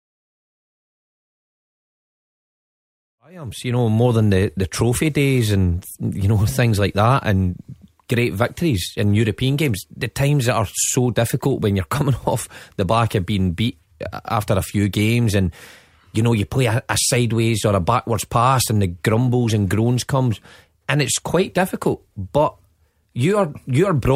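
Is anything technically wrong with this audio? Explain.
No, the speech fades in smoothly from about 3 s to 4.15 s as a deliberate edit, with no click or hard edge, and nothing after it needs fixing.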